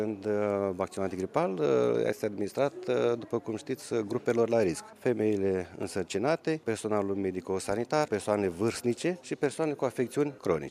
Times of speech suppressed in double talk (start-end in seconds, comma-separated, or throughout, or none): none